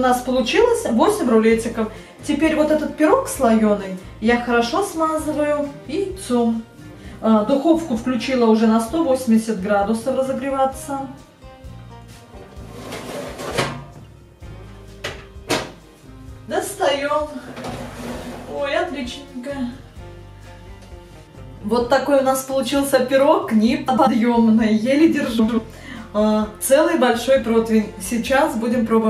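A short garbled flutter hits the audio twice, from 23.88 to 24.08 s and from 25.39 to 25.59 s. These are frames out of order: two adjacent blocks of about 93 ms each, which points to runs of roughly four frames, were decoded swapped, so each stretch plays its halves exchanged without losing any time.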